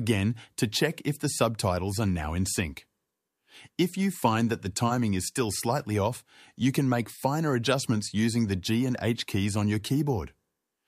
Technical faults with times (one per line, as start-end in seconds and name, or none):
none